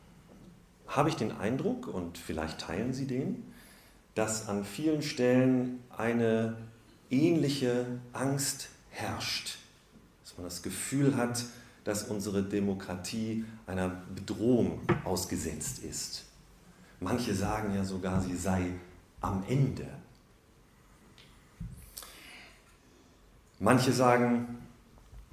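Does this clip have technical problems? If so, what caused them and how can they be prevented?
No, nothing in this recording points to a technical fault, so there is no cause to trace and nothing to prevent.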